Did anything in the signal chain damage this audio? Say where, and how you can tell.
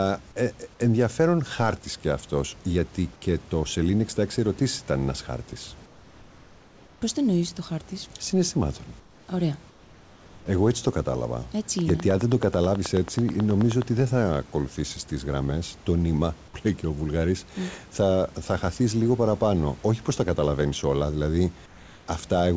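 Yes. Comfort noise in place of the background appears in the call-processing stage at 5.86–7.02 s, 9.00–9.28 s, 9.70–10.46 s and 21.66–22.08 s. In each pause, the real room noise gives way to a smooth, featureless hiss about 3 to 4 dB quieter, and the room noise returns when the speech does. The likely mechanism is discontinuous transmission: the sender stopped sending and the receiver synthesised noise. A noise gate would leave silence instead.

A train of clicks runs from 11.79 to 13.83 s. There are about twenty similar ticks at a steady 9.35 per second, with peaks roughly 10 dB above the signal. They continue through pauses. Their regular spacing and uniform shape set them apart from packet-loss glitches. The likely source is interference in the analogue wiring or a faulty connection or power supply.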